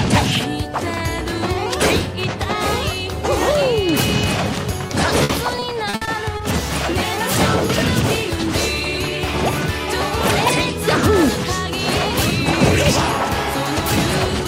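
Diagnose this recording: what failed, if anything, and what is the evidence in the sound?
Repeated packet loss (robotic sound) at the network stage, from 4.87 to 6.41 s. Seven short gaps, the longest 60 ms, total about 240 ms. Each is patched by extending the previous sound, so about 16% of that stretch is concealment, heard as choppy stutter with pieces missing.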